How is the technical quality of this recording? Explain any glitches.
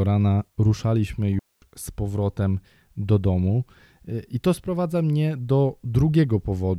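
The recording has one clear glitch. At 1.39 to 1.62 s, between "rana ruszaliśmy" and "z powrotem do domu", a digital wireless dropout mutes the speech for about 0.23 s. The receiver lost data and faded to near silence. Unlike an analog dropout, there is no noise burst around the hole.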